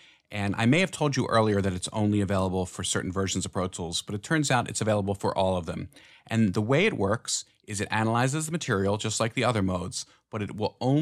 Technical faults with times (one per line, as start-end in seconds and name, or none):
4.48 dropped samples
9.93 dropped samples